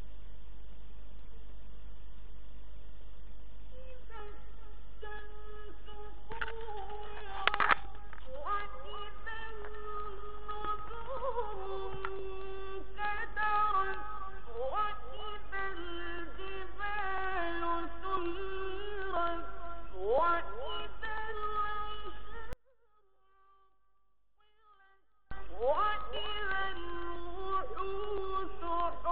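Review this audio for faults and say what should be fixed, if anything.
One channel inverted, from 22.53 to 25.31 s: the sound falls by about 32 dB and only a faint residue remains. The likely cause is one stereo channel with reversed polarity, so everything shared between the channels cancels when they are summed to mono. Prevent it by checking polarity on each channel and monitoring a mono fold-down before delivery.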